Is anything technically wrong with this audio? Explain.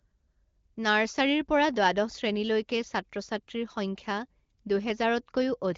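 No, nothing here is technically wrong.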